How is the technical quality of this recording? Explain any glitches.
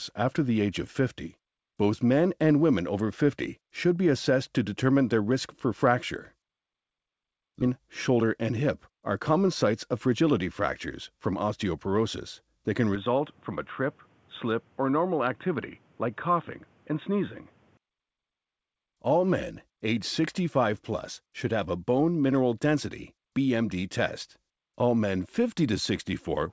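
The recording has three distinct glitches, all heard through a wideband call path whose content stops at 8 kHz, which fits a G.722 codec.

At 7.62 s there is a skip ahead: about a second of audio is discarded and the two sides are butted together with no gap. The waveform shows an abrupt splice with no silence.

From 7.72 to 10.39 s a jitter buffer speed-up trims pitch periods, running the sound about 7% faster at unchanged pitch and shedding roughly a fifth of a second. On a spectrogram, events crowd slightly closer together.

From 12.96 to 17.77 s the band suddenly ends at 3.8 kHz, the level drops somewhat and a faint new noise floor appears, likely from the input being switched to a poorer device. The spectrogram's upper region goes blank at that boundary.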